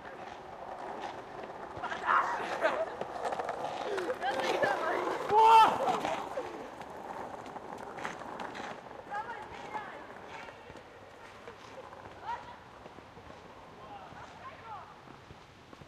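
No technical faults can be heard in the audio, so there is nothing to describe in time order.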